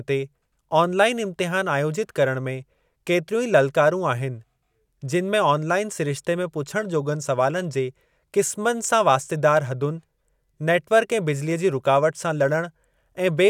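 No technical faults can be heard anywhere in this recording.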